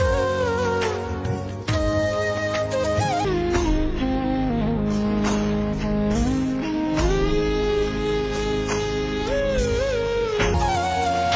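Wrong sample rate from 3.25 to 10.54 s: the audio drops a full octave (12 semitones) and plays at half speed, sounding low and dragged. Speed and pitch falling together without conversion fits material recorded at 32 kHz being played back at 16 kHz.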